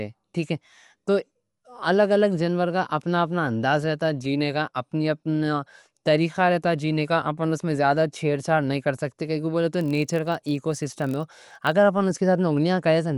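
The whole speech clip sounds dull, with rough, fluttery noise, which is likely Dolby Digital compression at a low bitrate, around 64 kbps. From 9.77 to 11.72 s a block size mismatch (padded) adds a 43.1 Hz buzz from zero-filled gaps, fitting 1024-sample reads. It plays at 0.999 speed, so it's barely slower.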